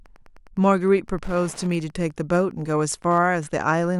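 Wi-Fi interference runs through the whole recording as a steady tick every 102.4 ms, roughly ten per second, sitting around 30 dB below the speech. A nearby radio's beacon bursts are being rectified by the audio circuitry and leaking in as clicks.

From 1.62 s to 2.70 s a block size mismatch (truncated) adds a 91.9 Hz buzz. One stage writes longer blocks than the next reads, so each block's tail is discarded. The speech keeps its normal pace and pitch.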